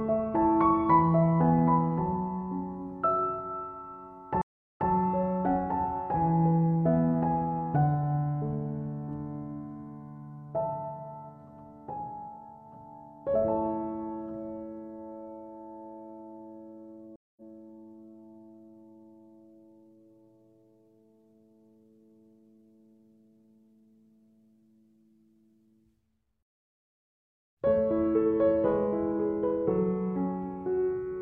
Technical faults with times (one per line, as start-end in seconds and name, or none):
4.42-4.90 stream reconnect
17.16-17.42 stream reconnect